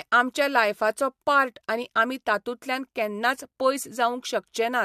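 No technical faults can be heard anywhere in this speech recording. Nothing in it calls for a timestamp or a note on how it was captured or processed.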